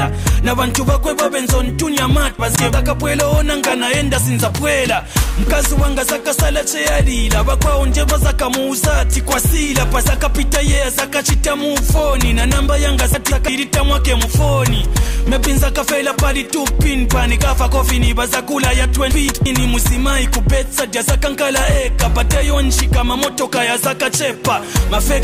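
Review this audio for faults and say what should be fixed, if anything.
Chunks out of order at 2.39–2.73 s, 13.14–13.48 s and 19.12–19.46 s. In each case two blocks of about 171 ms trade places, so the later block plays first. Nothing goes missing, but the order is wrong. Each spot has three hard joins. The sound jumbles briefly between them. To prevent it, put each chunk in its sequence position before playback or writing.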